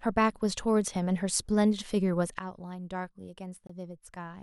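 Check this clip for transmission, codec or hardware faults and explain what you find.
Two things stand out: a level drop partway through and a brief dropout near the end.

Sudden gain jump, at 2.39 s: the level falls by about 11 dB in one step and stays down to the end. Speech and background noise drop together with no ramp, the way a gain setting or bit shift snaps in at once. That's the likely cause, and it can click at the transition.

Bluetooth stall, at 3.67 s for 24 ms: the audio cuts to dead silence, then carries on. The likely cause is interference holding up packets, so the headphone buffer ran empty and playback paused until the resent data caught up.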